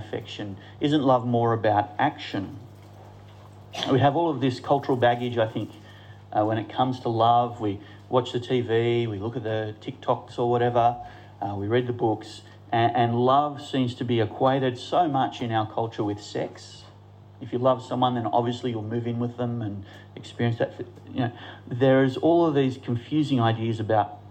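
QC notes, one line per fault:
Nothing here to flag; I listened all the way along and there's no fault worth a line.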